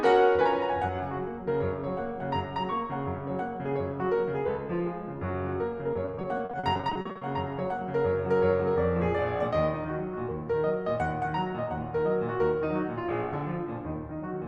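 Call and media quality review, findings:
Repeated packet loss (robotic sound), 5.93–7.23 s, music. Network or jitter buffer losing or delaying packets again and again. Concealment repeats the last audio to cover each hole. Pattern fits roughly 18 short gaps, longest 40 ms, 460 ms patched in total, about 35% of the span. Audible result: choppy music with fragments missing.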